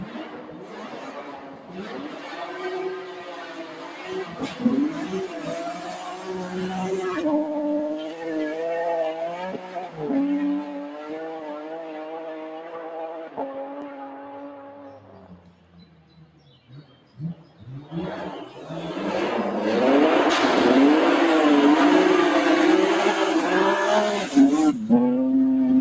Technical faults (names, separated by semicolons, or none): noise suppressor applied to music or sounds; sound cut by the noise suppressor